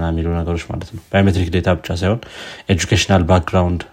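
Speech, with a single sharp click at 3.21 s, likely from dropped samples: a fraction of a millisecond goes missing and the waveform jumps, leaving no audible gap as a dropout would.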